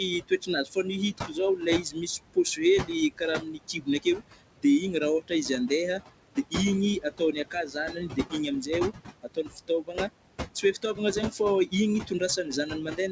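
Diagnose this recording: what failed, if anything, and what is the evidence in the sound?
The call processing stage is where this goes wrong, specifically the noise suppressor. You hear noise suppressor artifacts for the whole clip. The room noise, which sits only about 10 dB under the speech, gets pulled down by about 21 dB in the gaps and then swells back up under the talking. The suppressor is gating its noise estimate band by band on every frame, and the pumping you hear comes from those decisions.

The same stage is also producing speech cut by the noise suppressor. With a noise floor this high, it's mistaking quieter parts of the speech for background. You'll hear syllables go faint or get swallowed from 0.28 to 4.64 s (drops as deep as about 22 dB, roughly a second and a half of it in total), 7.02 to 8.7 s (about 17 dB), 9.23 to 10.1 s (about 21 dB), 10.55 to 11.73 s (about 14 dB), and from 12.07 s to the end (about 15 dB). 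The G.722 path's 8 kHz ceiling is just the codec's normal band limit.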